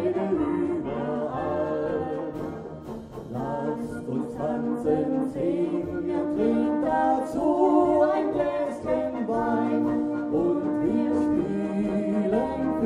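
No technical faults can be heard anywhere in the recording, and the signal holds steady and continuous throughout.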